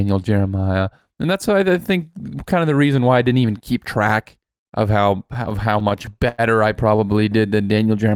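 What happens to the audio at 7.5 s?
From 7.38 to 7.87 s the speech undergoes a jitter buffer slow-down. The receiver's buffer was running low or had just raised its target delay, so it repeated single pitch periods or bits of pause to build a reserve, adding 76 ms and playing the stretch at 86% speed. Sounds are drawn out, yet the pitch stays the same. That unchanged pitch is what separates it from a tape-style slowdown, where pitch drops along with speed.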